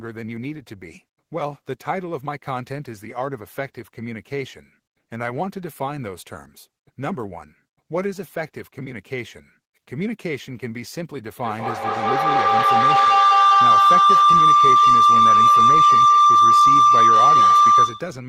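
From 11.37 s, feedback howl: a mic-to-speaker loop gaining each pass, swelling to a pulsing tone near 1 kHz about 12 dB above the speech.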